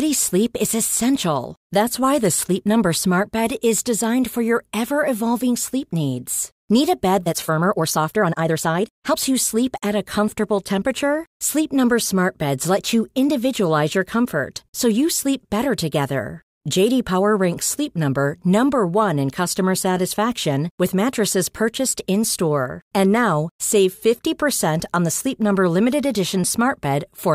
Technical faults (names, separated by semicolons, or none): time-stretched section